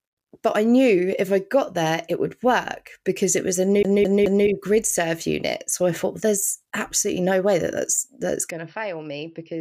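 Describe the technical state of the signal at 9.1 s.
At 9.1 s the signal sits inside a degraded stretch running from 8.51 s to the end of the clip at 9.60 s, beginning just after "way that that's that's". With no gap, the speech loses everything above 5.7 kHz, drops about 10 dB in level, and picks up a new noise floor roughly 45 dB below the signal. The sound turns dull and boxy. The likely cause is an input switched to a poorer device, which passes a narrower band and carries its own gain and noise.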